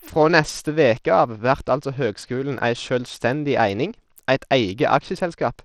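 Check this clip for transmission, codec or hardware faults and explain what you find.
One fault runs through the entire clip. The speech sounds gritty and dull, with treble that thins and flickers and a grainy, aliased edge. The likely cause is Bluetooth SBC compression at a small bit pool, fitting about 80 kbps. That starves the upper sub-bands of bits and coarsely quantises the rest.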